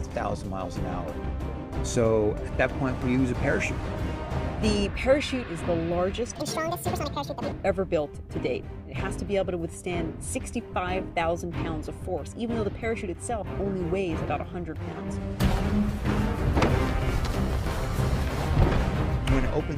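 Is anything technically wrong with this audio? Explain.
Yes. From 6.35 to 7.52 s, a section at the wrong speed plays 1.72 times too fast, likely from being fitted to the wrong clock. Pitch rises about ten semitones and the sound turns hurried. A spectrogram shows the bands jumping upward and squeezed in time.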